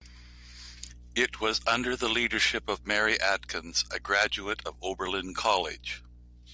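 Speech recording with no audible technical faults.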